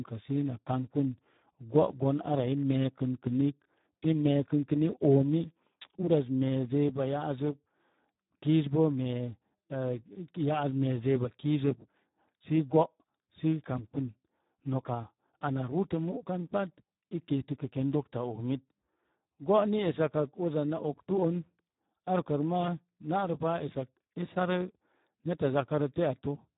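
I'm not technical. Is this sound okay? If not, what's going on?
No. From start to finish the speech sounds hoarse and grainy, and muffled, with nothing above about 3.8 kHz. That is heavy Speex codec damage: this old internet-call format was squeezed too hard, so it roughly imitates the voice instead of capturing it.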